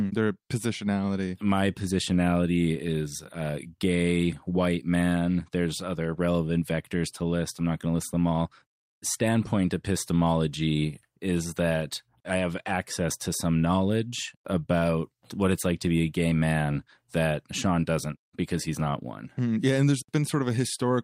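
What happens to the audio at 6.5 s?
Nothing goes wrong at 6.5 s; the speech carries on intact through that moment.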